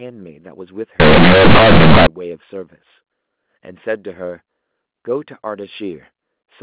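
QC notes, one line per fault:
0.997 to 2.07 s, companded audio read as linear: mu-law bytes play as plain 8-bit samples without expansion, so the speech turns into loud buzzy distortion with heavy noise.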